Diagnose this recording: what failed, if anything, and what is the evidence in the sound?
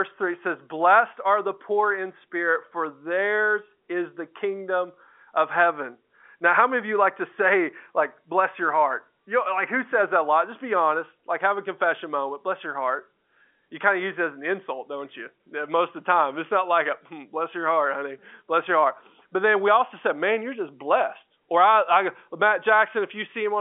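Nothing in this recording stood out as a failure on listening; the speech has the narrow, band-limited sound of an ordinary telephone line and nothing beyond that.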